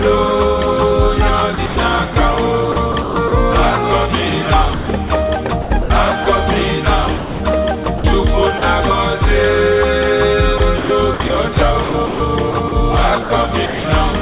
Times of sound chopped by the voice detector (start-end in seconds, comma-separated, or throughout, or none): 1.54-2.16, 2.72-3.32, 4.74-5.10, 5.62-6.26, 7.18-8.04, 10.58-13.84